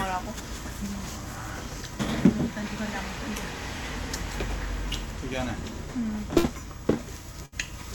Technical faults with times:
6.37-6.47 burst of packet loss
7.46-7.55 burst of packet loss

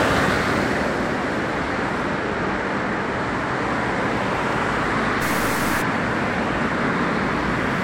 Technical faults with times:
0.00-7.83 transcoding between lossy codecs
5.22-5.82 stuck bit

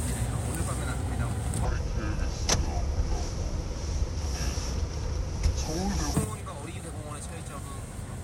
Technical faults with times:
1.65-6.14 section at the wrong speed
6.24-8.24 sudden gain jump

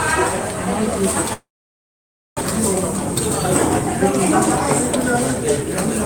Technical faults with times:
1.33-2.43 long network dropout
5.02-5.85 jitter buffer speed-up

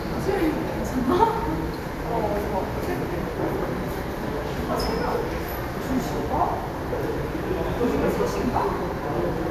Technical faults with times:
none

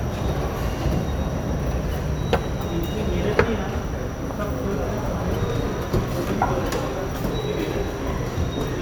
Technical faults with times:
none

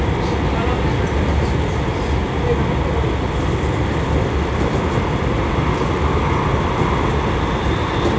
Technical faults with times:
none

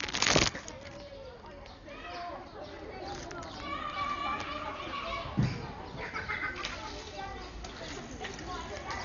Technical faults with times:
0.00-9.05 Dolby Digital compression

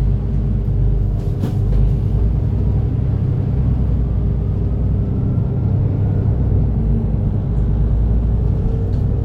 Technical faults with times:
0.00-9.24 mains hum

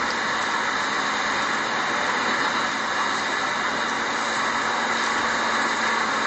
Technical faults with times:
0.00-6.26 low-bitrate audio saved at a high bitrate

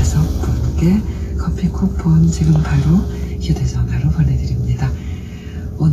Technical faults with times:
0.00-5.92 Vorbis compression

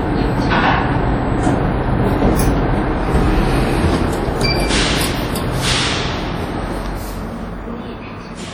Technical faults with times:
0.00-8.53 WMA compression

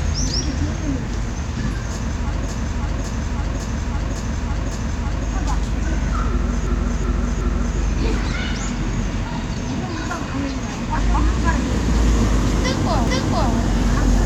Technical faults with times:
2.49-5.27 repeated frames
6.67-7.78 repeated frames
13.07-13.54 repeated frames

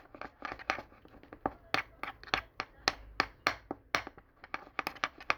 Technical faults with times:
none

